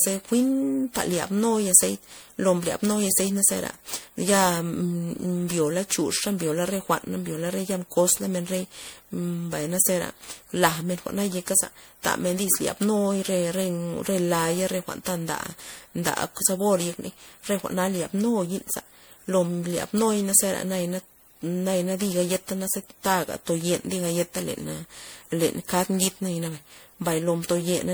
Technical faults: generation loss

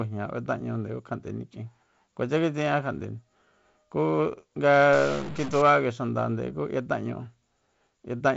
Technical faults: stuck bit

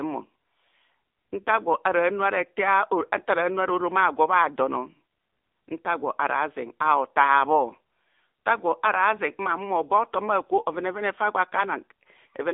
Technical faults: AMR narrowband mobile codec

